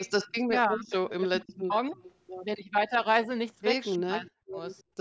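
Echo leak runs from 0.00 to 2.13 s. A delayed copy of the speech, trailing the original by about 302 ms and sitting roughly 20 dB below it, comes through as a faint shadow. The likely cause is a far end playing the call on a loudspeaker, with its echo canceller failing to remove everything its microphone picked up, so the remainder was sent back.

Speech suppressed in double talk overlaps that stretch, from 0.44 to 2.03 s. The speech sinks by as much as roughly 30 dB across about a second. This is likely an echo canceller that could not tell its own talker from loudspeaker sound while both sides were active, so it turned everything down. A brief, shallower dip of around 10 dB follows at 2.63 to 2.75 s. The deepest one, near 40 dB, hollows out the speech between 3.98 and 4.59 s.

A second echo leak from 4.29 to 4.83 s brings back the same roughly 302 ms delayed copy, now far quieter, about 35 dB under the speech. 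It is barely a whisper behind the talker, likely from the same incompletely cancelled loudspeaker path.

Background gated by the echo canceller appears at 4.87 to 4.97 s. The room sound dips by about 24 dB for roughly a tenth of a second and then returns. The canceller clamped the microphone hard while loudspeaker sound was playing, and it let go once that sound passed.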